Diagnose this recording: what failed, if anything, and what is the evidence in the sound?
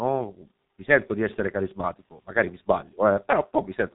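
The fault sits at the codec stage and runs through the whole speech clip: heavy G.723.1 codec damage. The audio has nothing above 3.8 kHz, and the speech sounds muffled and hoarse with smeared consonants, which fits a rate near 6 kbit/s. A plain low-pass filter or narrowband line would dull the top end but keep consonants crisp. Here the codec rebuilds the voice from a coarse model refreshed only every 30 ms frame, so fast transitions blur and the voicing turns rough.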